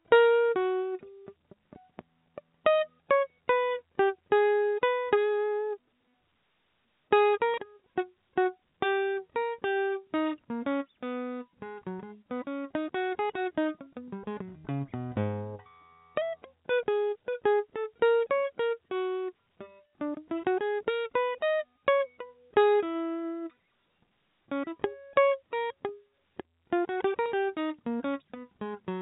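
No technical faults can be heard in this music.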